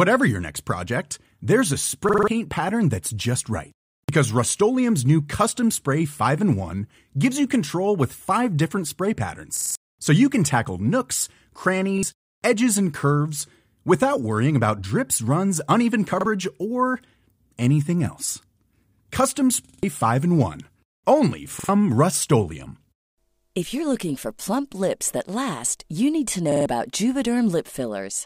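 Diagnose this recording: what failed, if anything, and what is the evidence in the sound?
The fault is a repeated buffer at the driver or buffer stage. Stutters occur at 2.09, 4.04, 9.57, 11.98 (just before "edges and curves without"), 16.21, 19.64, 21.60 and 26.52 s (after "last you need to"). Each is a slice of about 46 ms played again with a hard join, once to four extra times, which fits a 2048-sample buffer. New audio missed its deadline, so the device replayed stale data. Because the repeats are identical, it is not a dropout gap or smoothed codec concealment.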